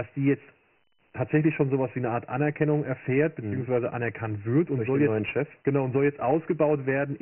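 Throughout, the speech carries heavy Dialogic VOX ADPCM damage. Nothing remains above 3 kHz, which fits 6,000 samples a second at 24 kbps. A gritty hiss trails the speech.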